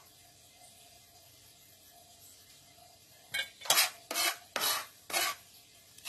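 Transcoding between lossy codecs runs throughout: a dull, smeared top end with layered artefacts, likely from a very low-rate HE-AAC encode later re-encoded as AAC-LC.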